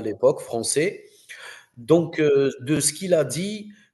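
The processing worked in one-second chunks, and each new chunk began about 23 ms before the previous one ended, so the joins overlap. At each seam, from 0.72 to 0.74 s, 1.74 to 1.77 s, and 2.77 to 2.79 s, that 23 ms sliver of speech plays twice. The result is a brief stutter or click recurring at a steady one-second rhythm, a regular hiccup in the flow of the speech typical of overlapping chunks.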